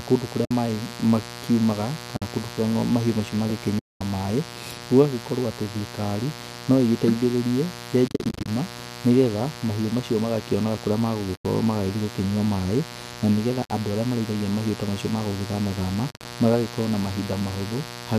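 A steady, raspy buzz sits about 15 dB below the speech for the whole clip. This is mains buzz: switching spikes on 60 Hz power inject a dense ladder of harmonics. Against it, soft-edged holes open at 0.45–0.51 s, 2.17–2.22 s, 3.79–4.01 s, 8.08–8.48 s, 11.36–11.45 s, 13.65–13.70 s and 16.11–16.25 s. At 8.08 s the gaps flicker in short bursts across 400 ms, and at 16.11 s across 140 ms. This is AAC frame loss with muting. Lost frames, likely the roughly 10 ms frames of low-delay AAC, were zeroed, and the overlapping windows faded the sound out and back in.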